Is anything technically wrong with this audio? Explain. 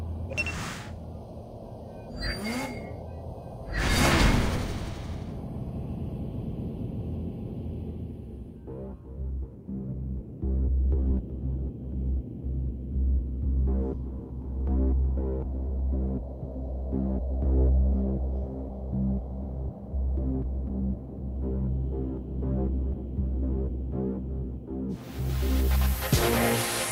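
No, nothing technically wrong can be heard in this audio. There is no problem to flag anywhere in the clip.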